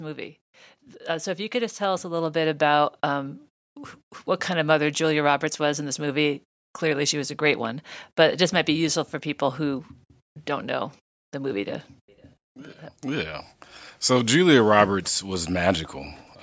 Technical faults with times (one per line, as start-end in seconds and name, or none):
1.01-3.44 automatic gain rising